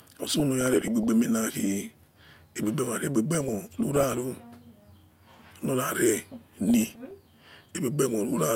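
Short blips of noise break over the speech from 0.40 to 1.07 s, 3.34 to 4.18 s and 6.69 to 7.11 s. This is DAB burbling: at roughly 0.4 to 0.5 percent bit errors, corrupted samples put noise blips in single sub-bands and corrupted scale factors throw individual sub-bands out of level for up to a frame.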